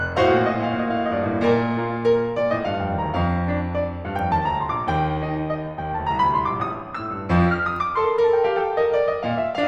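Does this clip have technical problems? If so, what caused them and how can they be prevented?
No, nothing technical stands out in this music clip, so there's nothing here that needs fixing or preventing.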